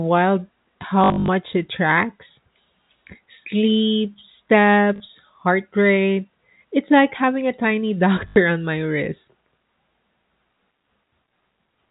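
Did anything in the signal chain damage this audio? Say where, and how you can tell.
Yes, at the network stage: packet loss with last packet repeated, over a G.711 telephone path whose 4 kHz band limit is audible. From 1.04 to 1.28 s, just before "it tracks", the sound stutters with a buzz of about 50 Hz, consistent with 20 ms packets, with gaps scattered over 240 ms and the longest run about 60 ms. Shorter stutters occur at 4.96 to 5.0 s before "heart rate" and 8.28 to 8.36 s before "on my wrist".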